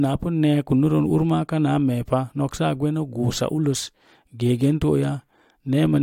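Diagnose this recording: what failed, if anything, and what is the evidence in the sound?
Nothing failed: no stage from capture to playback leaves an audible defect anywhere in this speech recording.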